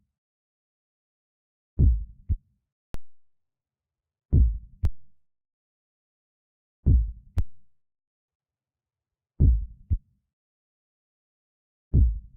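At 2.94, 4.85 and 7.38 s, a DC step jumps the waveform's zero line by about -21 dBFS. Each gives a low thump. The offset then decays away through a 2 Hz high-pass.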